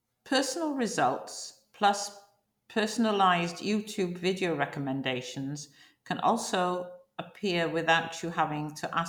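No technical faults can be heard anywhere in the clip, so there is nothing to describe in time order.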